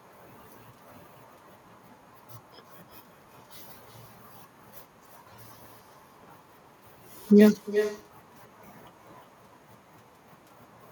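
Speech, and the whole way through it's dogged by echo with no canceller. Every phrase comes back roughly four tenths of a second later, about 9 dB down, sounding thinner than the original. That's the far end playing the call out of a loudspeaker, their microphone catching it, and nothing stripping it out before it travels back, so the delay you hear is the network round trip plus their room.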